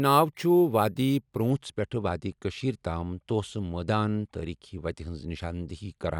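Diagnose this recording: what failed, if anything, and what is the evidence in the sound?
The fault sits in the sample-rate conversion stage: imaging from sample-and-hold upsampling, from the start to about 1.5 s, just before "پٮ۪ٹھہٕ وادی کٔشٖیرِ تام". The speech carries a bright, metallic fizz that rises and falls with it, about 27 dB below the signal, filling 12 to 24 kHz. That points to 24 kHz material doubled to 48 kHz by simply repeating each sample with no smoothing filter, so a mirrored copy of the spectrum folds up above 12 kHz.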